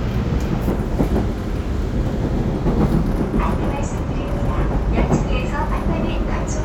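At 4.31 s, mains hum appears and continues to the end at 6.65 s. It is a steady, low 50 Hz tone with some low harmonics above it. Power-line current has leaked into the signal path, through a ground loop or stray pickup from a nearby transformer. The hum is strong, only a few decibels below the sound itself. It drones underneath everything and muddies the low end.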